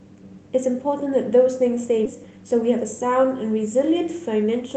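At 2.05 to 2.07 s the speech makes a skip ahead: roughly 0.4 s of audio is simply missing, with nothing filled in over the gap. Playback jumps straight from one point to a later one, so the sound on either side is butted together almost directly and the rhythm lurches forward. The cause is later audio already waiting in the jitter buffer while an earlier stretch was discarded, which shortens the delay by about the same amount.

Just after, from 2.14 to 3.24 s, comes a jitter buffer speed-up. The speech runs at about 111% of its normal rate while keeping its pitch, and sounds rushed. The receiver repeatedly cut out short slices of one or a few pitch periods, removing around 150 ms in total to bring an overfull buffer back toward its target delay. Throughout, the audio is band-limited to 8 kHz, consistent with a 32 kbps Opus call path.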